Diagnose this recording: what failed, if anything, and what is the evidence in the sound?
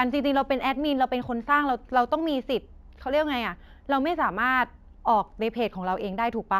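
Sample-rate conversion failed: imaging from linear upsampling across the whole recording. A faint mirrored copy of the speech spectrum sits at 8 to 16 kHz, roughly 40 dB down, adding metallic shimmer to sibilants. Straight-line interpolation filters poorly, which fits a 16 kHz source raised to 44.1 kHz. A spectrogram shows speech reflected about 8 kHz.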